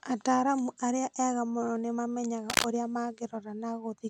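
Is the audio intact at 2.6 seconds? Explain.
No. From 2.50 to 2.65 s a burst of dense, uneven scratching rides over the speech, somewhat louder than the speech itself. This is cable scratch noise, likely from a worn cable or connector being moved so its contact resistance fluctuated rapidly.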